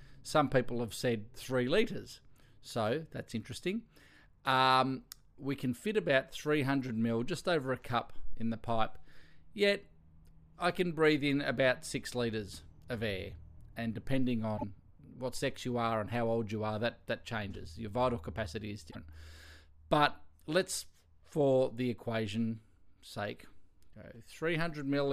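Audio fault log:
14.57–14.64 s, 18.90–18.96 s, 23.92–23.94 s: broken MP3 bit reservoir. Brief disturbances where the audio jumps ahead, likely because cut frames left the next frames borrowing wrong data.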